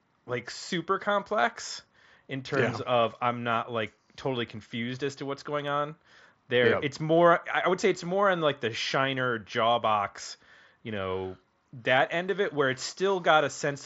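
No technical faults are audible.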